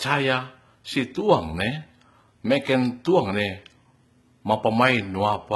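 Throughout, sibilants sound gritty and lispy with a metallic sheen, likely HE-AAC compression at a very low bitrate, around 16 kbps; spectrograms show repeated treble patches, nothing above 11.8 kHz.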